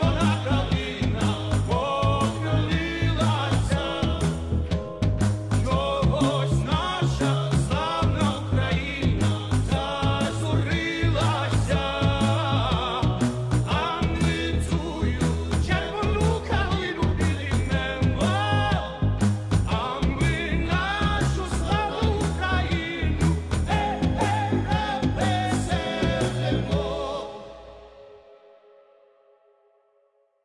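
Nothing technically wrong can be heard anywhere in the audio. No dropout, distortion or other fault appears at any point.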